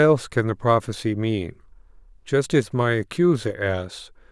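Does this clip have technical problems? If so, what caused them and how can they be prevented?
No, no technical faults detected.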